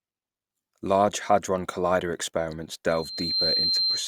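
At 2.88 s the microphone begins picking up the loudspeaker it feeds, and at 4.1 kHz the loop gain passes one, producing a loudspeaker feedback squeal. The tone swells over about half a second into a piercing whistle, roughly 5 dB above the speech, lasting to the end.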